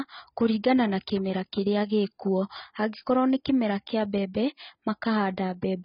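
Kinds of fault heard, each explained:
AAC compression: The speech has nothing above 5.3 kHz, so it sounds dull and muffled, and the damage is heavy throughout the clip. The likely cause is low-bitrate AAC-LC encoding, where the encoder quantises its frequency lines coarsely against a hearing model to save bits, removing the upper band and thinning what remains. The degree of loss points to a bitrate of around 16 kbps.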